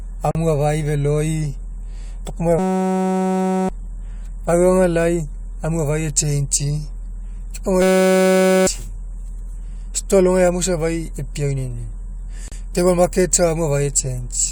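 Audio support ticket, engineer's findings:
Gap at a join of encoded pieces: 39 ms dropout at 0.31 to 0.35 s, before "afai feloi", and 37 ms at 12.48 to 12.52 s, before "table market safa". Unstripped encoder delay and end padding at the segment joins. On the waveform these show as flat, slightly smeared notches; on the spectrogram, as thin vertical blank stripes.

System hang loop: steady buzz at 2.59 to 3.69 s and 7.82 to 8.67 s. A 5.33 ms slice repeats at 188 Hz, which fits a 256-sample buffer, and about a second of speech is lost each time. The host or driver stalled while the hardware kept replaying the ring buffer. The waveform shows identical repeating cycles, and the spectrogram shows a harmonic comb at 188 Hz spacing.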